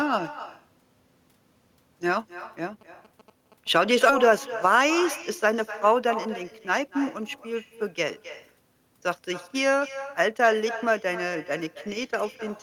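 Speech, and the whole thing carries an echo with no canceller: a quieter, thinner copy of the talker trails every phrase by roughly a third of a second, sitting about 14 dB down. It sounds like the far end had the call on a loudspeaker, its mic picked that up, and nothing stripped it out before it came back. From 2.81 to 3.77 s there's a burst of GSM signalling interference, a galloping dit-dit-dit of short 217 Hz buzzes, fairly quiet at something like 25 dB under the speech. That's a nearby 2G phone sending short radio bursts while signalling, and the audio circuitry rectifying them. At 4.09 to 4.11 s it skips ahead: around 0.7 s of audio just vanishes and the two sides butt together with no gap, the sort of thing you get when the jitter buffer overflows and dumps audio. Right after, from 4.23 to 6.89 s, there's a jitter buffer speed-up, with the speech running about 4% fast at unchanged pitch. 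The receiver is trimming small pitch-period chunks, roughly 100 ms in total, to pull the latency back down.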